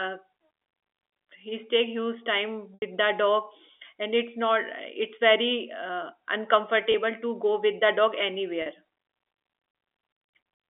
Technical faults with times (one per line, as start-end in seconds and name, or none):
2.74-2.82 packet loss with pitch repetition
6.92-6.94 packet loss with pitch repetition
8.62-8.66 packet loss with pitch repetition